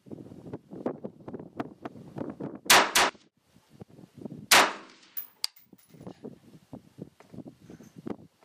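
From 1.59 to 3.09 s, a doubled audio track: a dry copy trails about 300 ms behind, roughly 5 dB quieter, likely from a slower capture path.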